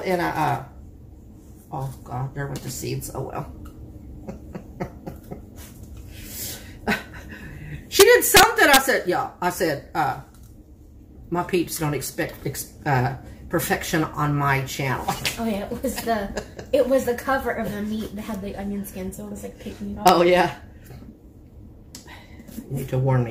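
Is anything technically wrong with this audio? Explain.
Yes. Violent cracks burst out from 8.00 to 8.77 s and once more at 20.08 s. This is integer overflow: peaks pushed about 5 dB, then about 1 dB, past the integer limit wrap to the opposite sign instead of being held, snapping across the full range.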